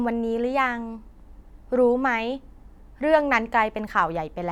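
No technical faults can be heard anywhere in this speech recording. There is nothing here to place on a timeline.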